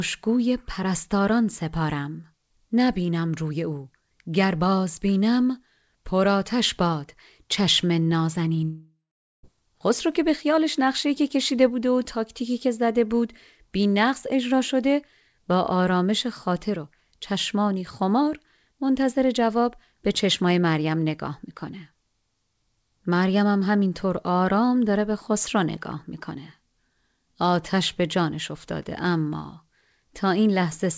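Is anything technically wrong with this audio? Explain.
Yes. From 8.64 to 9.46 s the audio breaks off, likely from a long network dropout. About 0.8 s of sound never arrives. The receiver extends the last sound as a fading buzz, then leaves roughly half a second of silence. The speech resumes with that stretch missing. The band stops at 8 kHz, which fits the G.722 call path the audio passed through.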